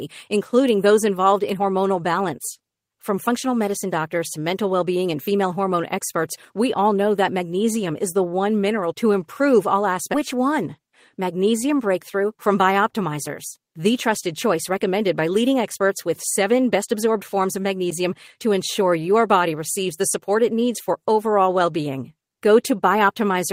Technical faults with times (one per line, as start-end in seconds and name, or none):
0.69 bit error spike
1.49 bit error spike
10.13 skip ahead
10.33-12.49 jitter buffer speed-up